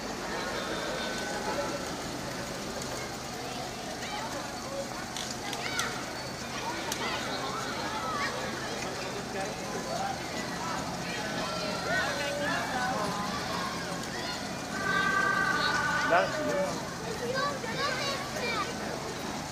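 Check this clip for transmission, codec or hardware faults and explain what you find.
One fault is present, already under way when the clip begins. From the start to 3.06 s there is a doubled audio track: likely a slower second capture path or misaligned edit mixing in a copy about 150 ms late and about 5 dB quieter. The result is a dry, flat echo that cuts off abruptly.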